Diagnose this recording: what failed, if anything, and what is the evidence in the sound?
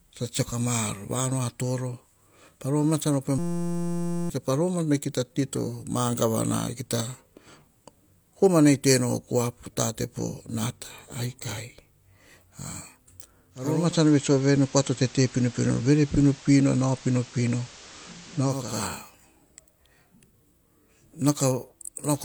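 From 3.38 to 4.30 s the audio turns into a steady buzz at 172 Hz, and about a second of speech is lost. A 5.8 ms slice, which fits a 256-sample buffer, repeats exactly: a system hang loop at the driver or buffer stage, with the hardware replaying one ring-buffer segment.

At 13.50 s a 500 ms cross-fade brings up hiss roughly 25 dB below the speech and shifts the level by about 3 dB until 18.85 s. This is digital radio blending to analogue FM at the receiver after the digital signal dropped.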